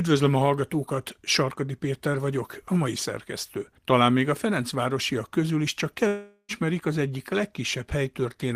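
A long network dropout runs from 6.07 to 6.52 s in this speech. The sound holds on as a smeared buzz that fades for roughly 0.4 s, then leaves about 90 ms of near-silence before the speech resumes partway along, with about 420 ms of it never heard. The likely cause is a stall in packet delivery: with nothing arriving, the receiver stretched the last fragment it had into filler until that ran dry, then skipped ahead once data returned.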